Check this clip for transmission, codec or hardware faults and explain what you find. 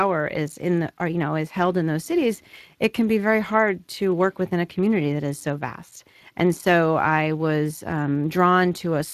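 One codec fault is present, running through the whole recording. Speex codec damage is plainly audible from start to end: the CELP coder has too few bits for the excitation, so the speech turns noisy and hoarse, consistent with a rate near 22 kbps. Nothing is present above 15.4 kHz.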